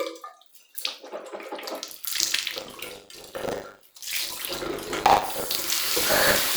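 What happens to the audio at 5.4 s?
At 5.4 s you're right in the middle of some buffer tearing that kicks in at 1.88 s and runs to the end of the clip. The writer and the hardware reader have drifted so they cross inside each period, leaving roughly a sixth of every buffer filled with sound from about 40 ms earlier, with hard joins either side. That's the rattly, robotic 100 Hz buzz riding on the sounds, which fits a 10 ms buffer period.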